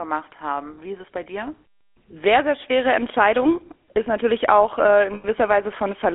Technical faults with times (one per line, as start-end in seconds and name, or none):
0.00-6.14 GSM full-rate codec
5.14-5.26 lost GSM frames